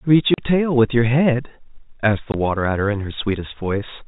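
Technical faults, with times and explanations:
0.34–0.38 s and 2.32–2.34 s: packet loss filled with silence. The speech drops out for 40 ms, then 20 ms, gaps that fit lost 20 ms packets. The receiver plays pure silence there, so each hole starts and ends abruptly against the telephone-band sound.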